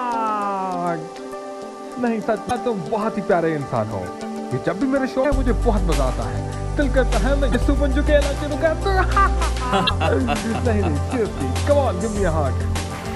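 Four short glitches break into the audio at 2.47–2.51 s, 5.21–5.26 s, 7.51–7.55 s and 9.86–9.91 s, each lasting about 40 ms. This is damaged data in a compressed stream: bytes in those stretches were lost or overwritten, so the decoder misreads the affected frames, loses sync and produces a brief glitch while it hunts for the next valid frame header.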